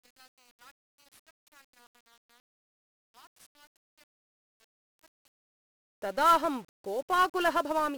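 From the start to 5.59 s the speech nearly vanishes when heard in mono. It drops by about 32 dB and leaves only a faint residue. The likely cause is one channel inverted: with one side's polarity reversed, the centred voice and its low end cancel against the other side when the two are summed. A waveform shows a collapsed envelope for this stretch, and a spectrogram shows faint traces until the level jumps back at 5.59 s.

Throughout the clip, 1-bit DFPWM compression buries the speech in a dense fuzzy crackle. Each sample carries just one bit that nudges an adaptive level up or down, here in a 48 kbps stream. That coarse tracking leaves heavy broadband quantisation noise and smothers the treble in hiss. On a spectrogram this appears as a continuous grey noise floor reaching the top of the band, and the waveform looks grainy and jagged rather than smooth.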